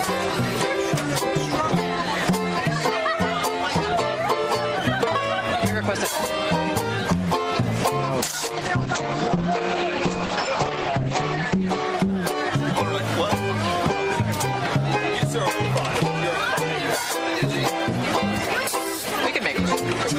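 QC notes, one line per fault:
8.18–12.91 s, call bitrate drop: the audio turns coarse and watery, and the top end disappears as the audio bandwidth narrows from about 20 kHz to 8 kHz. The roughness and dullness fit an encoder pushed from around 32 kbps down to roughly 10 kbps after the bandwidth estimate fell. At that rate Opus quantises the spectrum heavily and drops the highs. The worst stretch lasts about 3.4 s before the bitrate and the top end recover.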